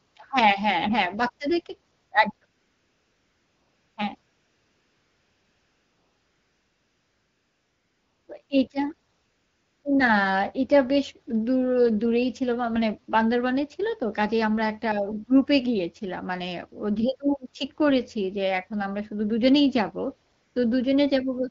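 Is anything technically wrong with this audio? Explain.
Yes. AMR comfort noise replaces the real background at 0.07, 1.95, 2.37, 2.45 to 3.97, 4.21 to 8.27, 8.45, 9.13 to 9.83 and 20.33 s. The phone judged these gaps silent and stopped sending speech frames, so the receiver substitutes smooth synthetic noise that switches in and out. The wideband codec underneath sounds clear, at a rate which fits 12.65 kbit/s.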